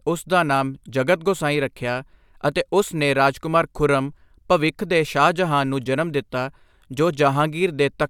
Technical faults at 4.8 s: none

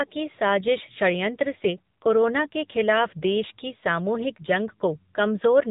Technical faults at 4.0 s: AMR narrowband mobile codec

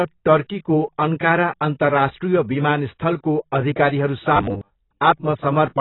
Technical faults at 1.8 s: AAC compression

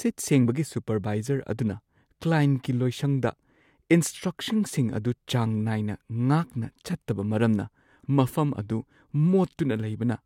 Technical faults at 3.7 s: none

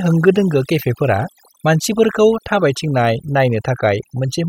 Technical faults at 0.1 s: overdone noise removal

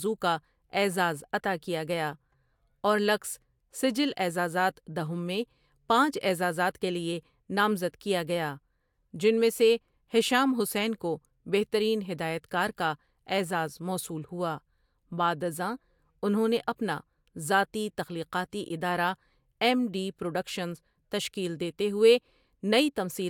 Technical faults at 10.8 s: none

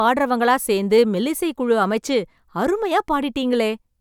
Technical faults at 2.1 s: none

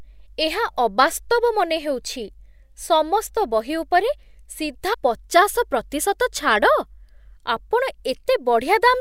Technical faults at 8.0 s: none

